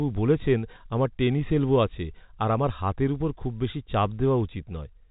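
Speech over G.711 telephone coding; nothing technically wrong here.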